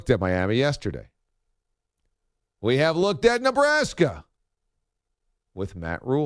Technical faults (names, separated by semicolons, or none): none